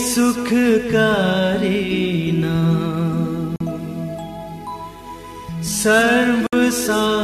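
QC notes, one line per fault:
3.56–3.60 s and 6.47–6.53 s, gap at a join of encoded pieces: continuous sound drops into brief silences of 44 ms and then 61 ms, each with edges smeared by the codec, after which the sound resumes exactly where it stopped. The audio was encoded in separate pieces and joined without trimming, so the encoder's start-up delay and the padding of each piece's last frame remain in the stream as dead air.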